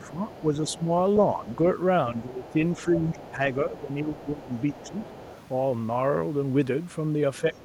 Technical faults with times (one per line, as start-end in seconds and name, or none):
0.00-1.45 speech suppressed in double talk
0.31-1.52 other side's voice leaking through
2.13-5.13 speech suppressed in double talk
2.45-5.37 other side's voice leaking through
7.41-7.64 speech suppressed in double talk
7.56-7.64 other side's voice leaking through